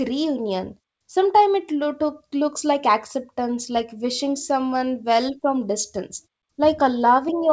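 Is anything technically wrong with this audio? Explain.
No, nothing here is actually broken: the background dropping to silence in the pauses and the top end stopping at about 8 kHz are just what you'd expect from speech sent over a call link, which fits a G.722 codec.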